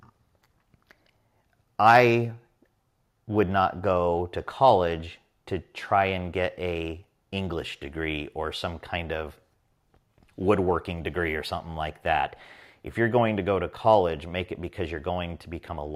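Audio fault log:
No technical faults can be heard anywhere in the signal.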